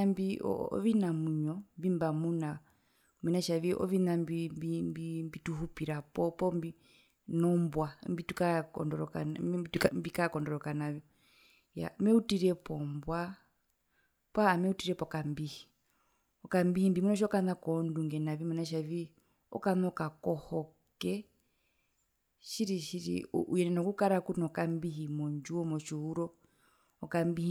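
Around 9.76 to 9.88 s there's a sudden gain jump of about 11 dB. The speech and the background noise leap up together, which points to a digital gain change applied in one step. The likely cause is a level setting switched without any ramp.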